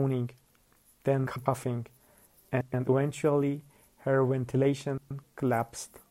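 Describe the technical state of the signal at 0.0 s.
At 0.0 s the signal is intact, with no dropout, distortion or other fault to be heard at that moment.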